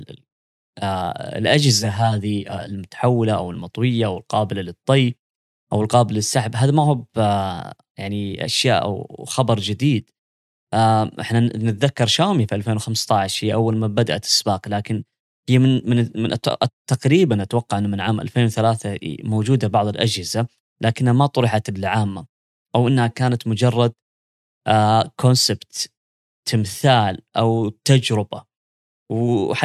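From 1.79 to 2.79 s the speech shows channel delay (comb filtering). One channel arrives around 10 ms late, so summing to mono cancels shared content at regularly spaced frequencies, starting near 50 Hz. The result sounds hollow and phasey, with fixed spectral notches.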